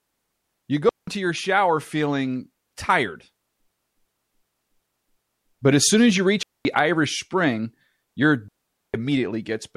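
At 0.89 s the speech drops into a clean hole of near silence lasting about 0.18 s, a digital wireless dropout: the radio link lost too much data and the receiver muted with a fast fade. Unlike an analogue dropout, no hiss or crackle surrounds the gap. From 3.72 to 5.57 s a system hang loop takes over. The computer froze while the hardware kept replaying the same 0.37 s buffer, which fits a 16384-sample ring. It repeats five times at about 2.7 Hz, a machine-gun stutter of identical audio rather than a buzz or a gap, and essentially nothing is lost afterwards. Two more dropouts follow, about 0.22 s at 6.43 s and about 0.46 s at 8.48 s, both the same clean silent holes.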